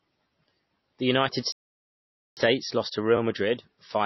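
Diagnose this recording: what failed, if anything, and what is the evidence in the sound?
The speech sounds dull and watery throughout, with swirling, metallic smearing on sibilants. This points to the codec stage, likely MP3 compression at a low bitrate near 24 kbps: the encoder cut the treble and let weak frequency lines drop in and out between frames.

From 1.52 s to 2.37 s the sound stops dead mid-flow for about 0.85 s, then resumes. At the playback stage this is likely a playback stall: the player ran out of buffered data or its thread was blocked, so the output went silent until it recovered.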